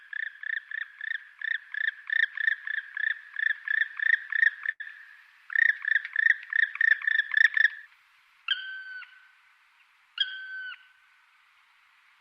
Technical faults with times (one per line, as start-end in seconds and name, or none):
4.71-4.82 burst of packet loss